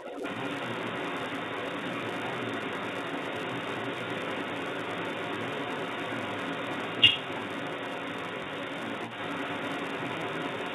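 From the very start, a steady buzz at about 172 Hz rides on the speech and rises and falls with its level, which fits a filter restarted on every block of 256 samples. Because each block begins from silence, the ticks stay locked to a fixed rate rather than following the talker's pitch.

Throughout the whole clip, a second voice is also audible at a strong level. This is the other side's voice leaking through, likely because the echo canceller left loudspeaker sound in the microphone.

At 8.44 to 8.46 s, a brief held, buzzy sound marks packet loss with pitch repetition. About 20 ms of audio went missing and was bridged by repeating the last pitch period. Unlike a dropout, this leaves no silent gap.

All of this sits within the band-limited sound of G.711 telephone coding.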